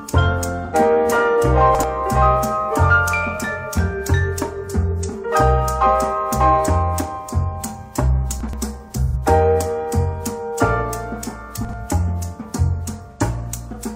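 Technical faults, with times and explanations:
0.65–0.75 s, 5.03–5.14 s, 9.06–9.16 s and 13.11–13.21 s: AAC frame loss with concealment. At each point the decoder lost data and patched the gap by reusing the last good spectrum with randomised phase. That produces a brief smeared, noisy, phasey blur rather than silence. The gaps last about 85 ms, except about 43 ms at 5.03 s. That fits one or two 1024-sample frames. On a spectrogram, each patch shows as a flattened, time-frozen block with blurred harmonics. The waveform envelope there looks smooth and noise-like.
1.75–1.84 s, 8.41–8.53 s and 11.65–11.73 s: chunks out of order. A roughly 43 ms block of audio is played late, after material that should follow it. It is one block late at 1.75 and 11.65 s, and two blocks late at 8.41 s. Nothing is missing, but the sequence jumps backward and then forward, so each moment sounds jumbled, with three hard joins. 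The waveform shows abrupt discontinuities at the block edges. The spectrogram shows vertical broadband lines there and content that appears out of sequence.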